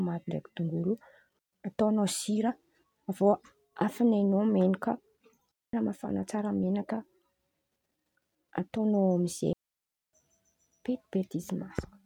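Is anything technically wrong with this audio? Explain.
Yes. The speech has three digital wireless dropouts. The first runs from 1.39 to 1.53 s, between "ndraiky dongolo" and "ataon̈ao sira avy". The second runs from 5.52 to 5.73 s, just before "mafan̈a tsara menakà". The third, from 9.53 to 10.13 s, lasts about 0.6 s. Each time the radio link lost too much data, so the receiver muted with a very quick fade. The result is a clean hole of near silence. Unlike an analogue dropout, no burst of noise or hiss comes before or after.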